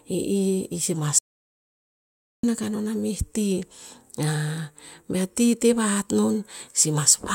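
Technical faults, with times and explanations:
1.19 to 2.43 s: audio dropout to silence. The speech cuts off abruptly and resumes after 1.25 s of complete silence with no room tone, likely because the input was lost while recording continued. The waveform shows a flat line, and the spectrogram shows an empty vertical band.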